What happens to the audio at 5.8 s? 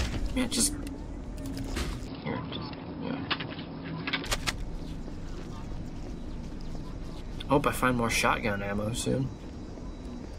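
Nothing goes wrong at 5.8 s; the audio plays through that moment intact, with no dropout, click, glitch or other fault.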